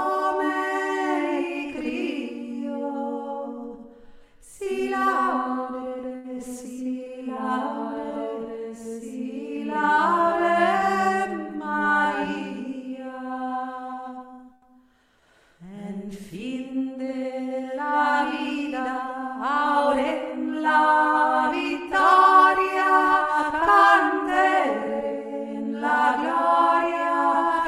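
The clip is a network audio stream with four separate receiver-side faults. From 5.89 to 6.39 s there's repeated packet loss that gives it a robotic sound: three gaps in half a second, the longest 82 ms, each patched by continuing the previous sound. About 60 ms is really missing, and roughly 28% of that stretch is concealment, so it comes across choppy. Then from 13.94 to 15.22 s the jitter buffer does a slow-down, repeating small pieces to add 45 ms and build a reserve. The audio drifts to 97% speed at unchanged pitch, with slightly stretched sounds. Inside that, at 14.53 to 14.65 s, there's a short stall from a late packet. The buffer ran dry and held the last sound for 91 ms until the packet arrived, so nothing is lost, but one sound hangs too long, and the delay rises by 91 ms. Finally, 17.02 to 17.78 s is a jitter buffer speed-up that trims short chunks, about a tenth of a second in total, to bring the delay back down. 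Playback runs at 111% speed, same pitch, and sounds a bit hurried.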